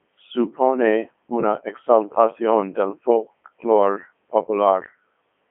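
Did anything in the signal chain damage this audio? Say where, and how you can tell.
Yes. The damage happens at the codec stage, and it runs through the whole clip. This is the Codec 2 vocoder. The speech sounds robotic and buzzy from start to finish, because the decoder rebuilds the voice from sine waves using only pitch, voicing, energy and envelope. The original waveform is never preserved. A spectrogram shows nothing above 3.4 kHz within a 250 Hz to 3.4 kHz line band, with heavy, regularised harmonic combs. The level of damage fits Codec 2's 3.2 kbit/s mode.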